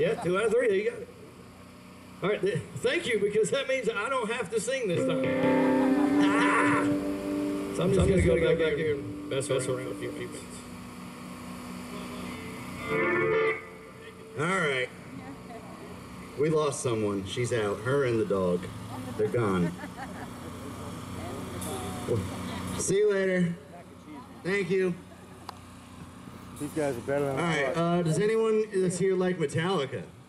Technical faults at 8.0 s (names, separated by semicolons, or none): doubled audio track